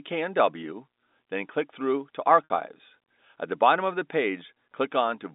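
At 2.45 to 2.50 s, packet loss with pitch repetition leaves a brief held, buzzy tone that dies away rather than a hard silent gap. About 60 ms of audio is missing, which fits three lost 20 ms packets, and the receiver loops the last pitch period to cover them. The band-limited G.711 telephone coding stays steady through it.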